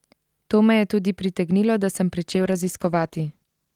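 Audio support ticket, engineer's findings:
Call bitrate drop at 2.33 s, right after "tudi pritegnilo da sem", lasting to the end of the clip (about 1.4 s). The speech goes rough and watery, and the top end dulls. Probable component: the encoder reacting to a falling bandwidth estimate. The quality change fits a cut from about 48 kbps to about 14 kbps. At that rate Opus codes coarsely and trims the highs. No recovery before the clip ends.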